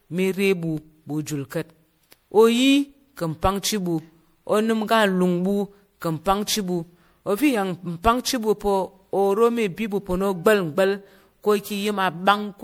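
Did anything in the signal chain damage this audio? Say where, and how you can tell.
Yes. Throughout the speech the sound is swirly and hollow, with a smeared quality and softened attacks on consonant onsets, more degraded than a single MP3 pass at 96 kbit/s should leave it, even though content still reaches about 20.8 kHz. This points to the codec stage, likely generation loss from around seven successive decode and re-encode passes: each pass quantises again on a shifted frame grid, so noise and spectral holes accumulate.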